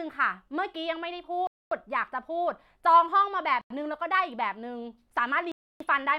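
The speech drops to dead silence three times: from 1.47 to 1.72 s (about a quarter second), from 3.61 to 3.70 s (a brief 0.09 s gap), and from 5.52 to 5.80 s (nearly 0.3 s). Each is likely a Bluetooth stall, where the headphones' buffer ran empty while delayed packets were resent. Unlike a codec dropout, there's no warbling or smeared filler, only a clean hole, after which the sound comes back abruptly.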